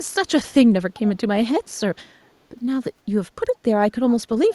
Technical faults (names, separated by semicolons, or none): echo leak